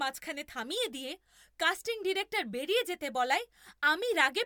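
No technical faults can be heard anywhere in this speech recording. Nothing breaks into the audio at any point, so there are no fault times to give.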